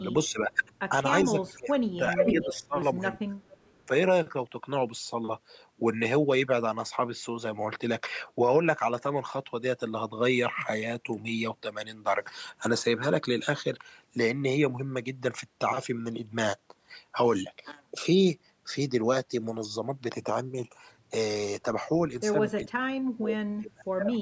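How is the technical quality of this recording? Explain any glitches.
The recording has two recurring call-path faults, clustered in the first four seconds and the last two.

Speech suppressed in double talk occurs at 0.32–0.58 s, 1.24–2.76 s, 3.28–3.32 s, 22.65–22.75 s and 23.17–24.17 s. It is likely caused by an echo canceller that could not tell the near talker from the loudspeaker echo while both sides spoke, so it turned everything down. The voice dips by about 10 dB at first and by about 40 dB near the end, nearly cutting out. On a waveform these show as sudden envelope troughs. On a spectrogram they appear as faded vertical bands, with the upper harmonics thinning.

Echo leak appears at 0.63–0.73 s, 2.18–2.61 s and 3.40–3.85 s. It is likely caused by residual loudspeaker pickup that an echo canceller failed to remove and then sent back. A delayed copy of the voice trails by 390 ms in the first instance and 445 ms in the later two. 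It is barely audible at 0.63 s, faint at 3.40 s, and roughly as loud as the direct voice at 2.18 s. On a spectrogram it shows as a ghosted, time-shifted repeat of the harmonic pattern. Like all the audio, it contains nothing above 8 kHz, which is consistent with ordinary call-band microphone processing.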